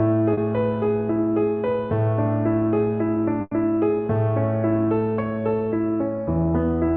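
At 0.33 to 0.39 s there is a short concealed packet loss. About 40 ms of the stream arrived too late for the decoder, so the receiver filled the hole by extending the last sound it had, following its pitch where it was tonal and using shaped noise where it was not, before blending back into the real signal. What you hear is a brief smear or wobble lasting a few hundredths of a second, and the 40 ms of audio that should have been there is gone.

At 3.41 to 3.53 s a burst of packet loss takes out a longer stretch. Several consecutive packets failed to arrive in time, about 100 ms in all. The concealer carried the preceding sound forward for roughly 100 ms, fading it as the gap went on, so it comes through as a held, dying buzz or hiss. About 10 ms of silence follows before playback resumes further along, with the missing 100 ms simply skipped. The call codec itself sounds like Opus at a modest rate, and its top end stops near 12 kHz.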